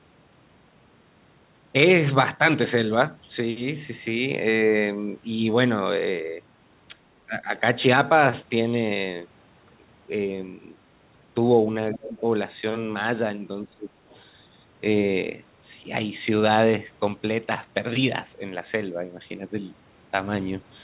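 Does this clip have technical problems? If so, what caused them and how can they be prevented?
Yes. Speech suppressed in double talk, likely from an echo canceller mistaking overlapping near-end speech for echo, pulls the voice down at 7.27–7.48 s (about 10 dB), 11.92–12.23 s and 13.64–13.93 s (about 25 dB). Keeping the far-end reference clean and tuning double-talk detection would prevent it.

The other side's voice leaking through, likely from residual loudspeaker echo the canceller missed, appears faintly at 14.09–14.22 s, roughly 35 dB below the speech. Better acoustic isolation or stronger residual echo suppression would prevent it.

The call path's narrowband G.711 coding leaves nothing above 4 kHz, which fits a 64 kbps telephone codec.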